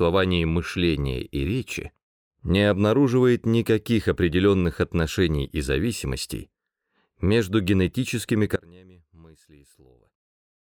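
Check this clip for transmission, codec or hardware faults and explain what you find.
One fault is present: an audio dropout to a faint residue, starting at 8.56 s and lasting to the end of the clip. The most likely cause is that the wanted signal was lost somewhere upstream while the path after the break stayed live and kept passing whatever reached it. The sound cuts off abruptly, not as a fade. For the remaining time only a faint leak of the sound is left, roughly 30 dB below its earlier level.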